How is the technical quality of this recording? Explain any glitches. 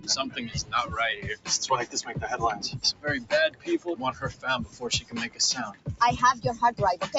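The recording's main problem is a speech noise suppressor processing non-speech audio. It comes through a call path whose bandwidth stops at 8 kHz.

Throughout, the noise suppressor applied to music or sounds treats steady tones and tails as noise. It swings the level by around 15 dB, so the audio pumps while attacks survive, unlike simple compression.

Sound cut by the noise suppressor occurs at 0.56–0.72, 2.75–3.05, 3.50–3.68, 4.13–4.44, 4.66–4.82, 5.01–5.39 and 5.72–5.88 s. Sustained sound sinks by about 12 to 14 dB while onsets pass, unlike a dropout, which silences everything.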